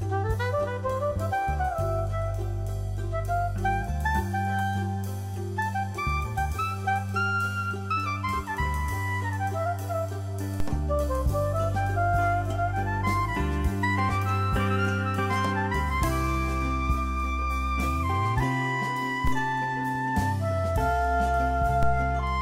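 At 10.60 s, 19.27 s and 21.83 s, a DC step produces a low thump as the waveform's zero line suddenly jumps, about -18 dBFS for the first two and about -16 dBFS for the last. Each offset then drains away through a 2 Hz high-pass, so the baseline slides back over a fraction of a second. On a waveform this shows as an abrupt shift then a smooth curve home. On a spectrogram it appears as a brief broadband column with low-frequency energy at each moment.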